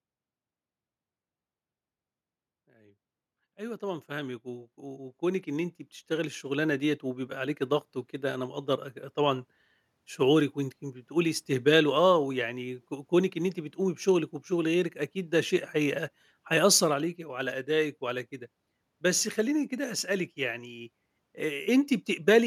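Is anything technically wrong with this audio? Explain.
Yes. Automatic gain rising, from 2.66 to 8.64 s: the gain control judged the input too quiet and slowly pushed its gain up by about 16 dB, so the speech and the background noise swell together across those six seconds.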